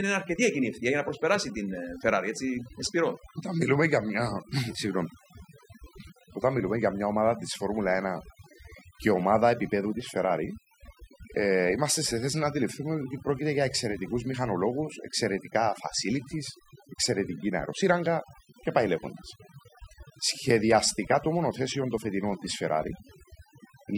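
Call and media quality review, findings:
Overdone noise removal, present throughout the speech. Noise suppressor set far too aggressive: bands near its noise estimate are pulled down or gated out entirely, taking low-level speech energy with them. Result: background drops and breaks up into twinkling musical-noise specks; soft consonants and word tails eroded. Probable component: denoiser stage in capture or processing chain. Fix: reduce suppression depth, raise spectral floor.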